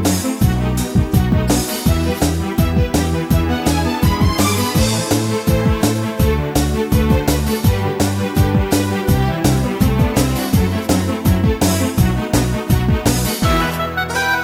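Crude rate conversion runs throughout the clip. It sounds like a step from 32 kHz to 48 kHz done by repeating the nearest sample without filtering, leaving a regular error pattern about 20 dB below the signal. This is heard as a gritty, inharmonic fizz riding on loud and high sounds.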